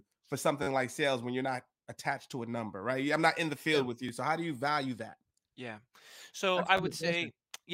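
At 0.63 to 0.67 s, just before "like sales when you're", there is a repeated buffer. New audio arrived late, so the device replayed its last block of about 11 ms, which fits a 512-sample buffer. The block loops with hard joins and sounds like a brief buzz. A shorter one follows at 4.09 s, after "field yeah with you", heard as a single click. Another comes at 6.77 to 6.80 s, a quick stutter. No speech seems lost. It just stalls briefly.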